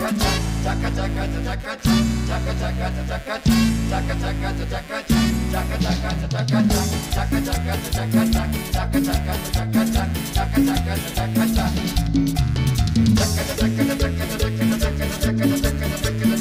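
Computer activity noise runs through the whole recording: a buzzy, chirping texture pulsing at around 150 times a second, sitting roughly 25 dB under the sound. It comes from the processor, graphics card or mouse drawing changing current through a ground shared with the audio circuit. Unlike steady mains hum, it flickers and shifts with the machine's workload, not with the audio.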